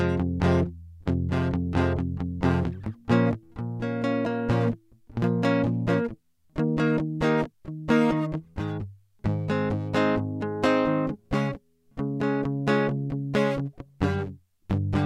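No faults were heard anywhere in the music; nothing to flag.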